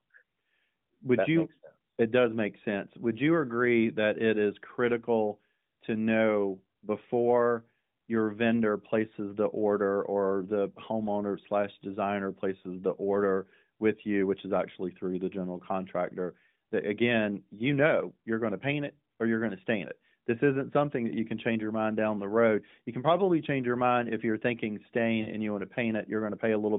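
At 25.22 to 25.30 s, between "mind if you're thinking" and "and you want to", there are lost AMR speech frames: about 40 ms went missing, which fits two 20 ms frames failing their checks. The decoder carries the last good pitch and vocal-tract settings forward at lower gain, so the sound smears and sags briefly instead of cutting to silence or clicking as a plain dropout would, and then returns weak for a moment within the narrowband AMR-NB band.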